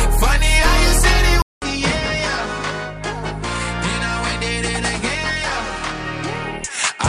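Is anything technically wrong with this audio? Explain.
Yes. From 1.42 s to the end, the sound changes character in a way consistent with the input having likely switched to a poorer device. A short silence of about 200 ms marks the switch. After it, nothing is present above 9.9 kHz, so the top end sounds dull and boxy. The level drops by around ten decibels, and a new background noise appears, sitting roughly 50 dB below the signal, as a different capture path with its own narrower band, gain and noise floor would produce.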